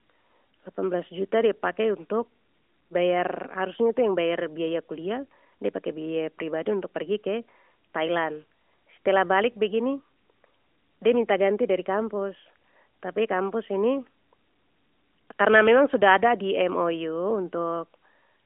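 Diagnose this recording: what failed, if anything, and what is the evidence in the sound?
Nothing failed; the recording shows no faults.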